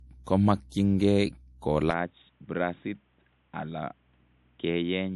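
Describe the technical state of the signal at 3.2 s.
At 3.2 s the signal sits inside an input switched to a poorer device, which runs from 1.91 s to the end with no gap at the changeover. The band now stops at 3.8 kHz, the level is down by about 5 dB, and a new noise floor appears roughly 40 dB below the speech, so the sound is dull and boxy. The likely cause is a move to a narrower microphone or a headset's call profile.

Underneath this, the whole clip shows low-bitrate audio saved at a high bitrate. There is nothing above 11.5 kHz, and the MP3-style smearing points to a low-bitrate first encode later re-saved at a high rate. That second pass likely added size without restoring what the first encode removed.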